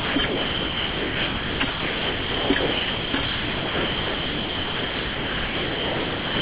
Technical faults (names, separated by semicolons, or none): sound dropped by the voice detector